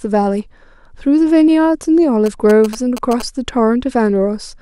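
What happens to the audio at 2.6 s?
At 2.6 s the speech is overlaid by GSM signalling bursts, running from 2.26 to 3.22 s. A nearby 2G phone's radio bursts are rectified by the audio circuitry, producing a galloping dit-dit-dit of short 217 Hz buzzes roughly 15 dB below the speech.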